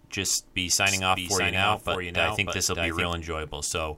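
From 0.87 to 3.13 s there's a doubled audio track: a flat, dry copy trails around 0.7 s behind, a few dB quieter, likely from a slower second capture path.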